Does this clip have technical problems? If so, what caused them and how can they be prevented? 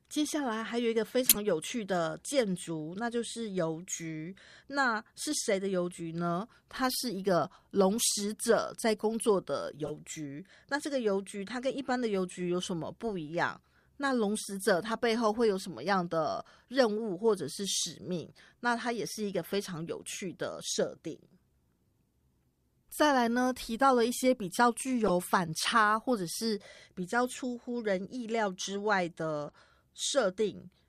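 Yes. Corrupt frames were decoded at 1.23 to 1.36 s, 9.84 to 9.92 s, 25.06 to 25.10 s and 29.48 to 29.54 s. Flipped bits in the compressed stream made the decoder misread gains or codes. Energy then lands at wrong frequencies for a few frames each time. Each event is a short burst of wrong sound in the speech. The first is the loudest. The last is much quieter. Checking each frame and concealing failed ones, instead of playing them, would prevent this.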